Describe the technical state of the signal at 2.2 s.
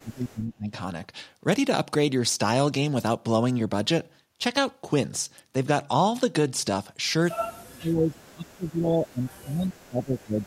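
At 2.2 s the speech signal is intact, with no audible dropout, distortion, noise burst or other technical fault at that point.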